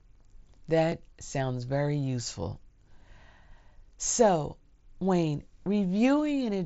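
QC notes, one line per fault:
0.92 s, dropped buffer (overrun): a jump in the sound just before "sounds very useful". A tiny slice of audio was likely overwritten before collection, so the sound jumps ahead.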